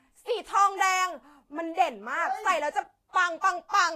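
From start to finish, the speech carries plainly audible codec damage, likely Vorbis compression at a low setting, around 32 kbps. Nothing remains above 14.2 kHz, and the treble beneath that cut-off is quantised so coarsely that fine detail turns into hiss of similar energy, giving a grainy, roughened texture with blurred consonant attacks. A simple low-pass filter would only dull the top end, whereas here the remaining high band itself sounds noisy.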